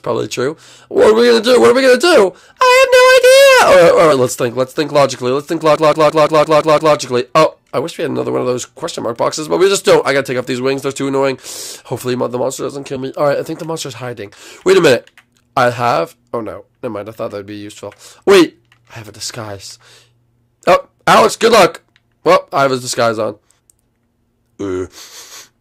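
Compressed frames skipped at 4.11 s: about two frames, roughly 40 ms of audio, never play, so the sound jumps forward.

System hang loop from 5.76 to 6.96 s: the system froze while the hardware kept replaying one 170.67 ms buffer, which fits an 8192-sample ring, seven times at 5.86 Hz, giving a machine-gun stutter.

Compressed frames skipped again at 12.95 s, dropping about two frames, and at 23.58 s, where roughly three frames, about 70 ms, vanish.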